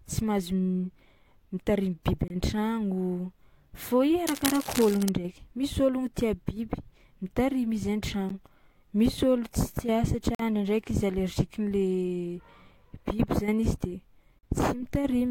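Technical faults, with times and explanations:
2.28–2.30 s, 8.29 s, 10.35–10.40 s, 14.39–14.43 s: gap between stream segments. The speech drops to silence with hard edges, lasting about 24, 12, 48 and 44 ms, and nothing is lost around the holes. Their spacing fits 2-second segments whose time stamps leave small gaps that the player fills with silence. Unlike a dropout or packet loss, the sound resumes exactly where it stopped, and the holes only add time.
4.26–5.09 s: cable scratch noise. Right after "fô i", dense, uneven bursts of scratching and rustling sit over the speech for under a second at roughly 10 dB below it. This is likely a worn cable, connector or control being moved, so that contact resistance fluctuates rapidly. Unlike steady hiss or hum, the noise is irregular and confined to this one stretch, and the speech itself is not cut.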